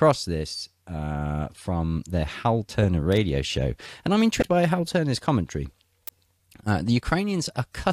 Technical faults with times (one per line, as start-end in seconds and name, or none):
3.12 electrical switching spike
4.39-4.43 damaged data in a compressed stream
6.08 electrical switching spike